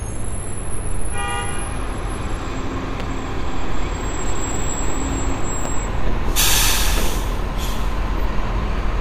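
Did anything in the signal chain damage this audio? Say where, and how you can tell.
Yes, there are two loud pops, one at 3.00 to 3.03 s and another at 5.65 to 5.68 s. Each is a single sharp hit, roughly 10 dB above the surrounding level, and the sound keeps going underneath both. That points to the analogue side, most likely a plug, switch contact or static discharge dropping a voltage spike into the line. The following circuitry turns that spike into a brief thump laid over the audio.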